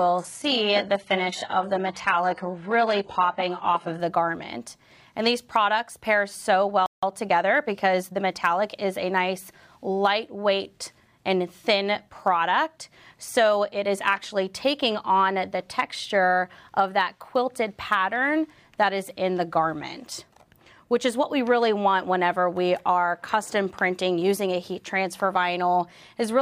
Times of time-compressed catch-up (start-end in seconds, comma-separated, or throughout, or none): 7.03-8.67